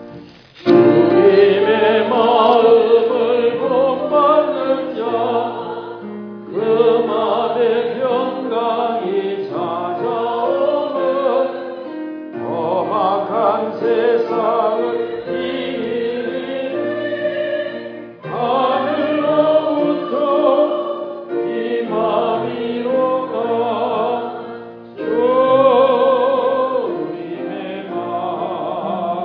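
Nothing here stands out as a technical problem; the sound runs along without any glitch, dropout or disturbance worth pointing to.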